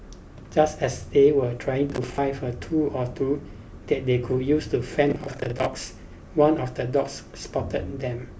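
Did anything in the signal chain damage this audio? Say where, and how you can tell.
Yes, there's processor overload crackle at the driver or buffer stage, in two bursts: 1.90 to 2.18 s and 5.10 to 5.66 s. Each one is a gritty, tearing crackle sitting on the speech that cuts out as soon as the load eases. The processor kept missing its deadlines for buffers of roughly 20 ms, around ten in each burst, and each miss replayed a scrap of old audio with hard edges.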